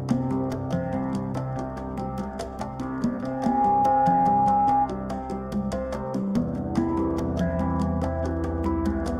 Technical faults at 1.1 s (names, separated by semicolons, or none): none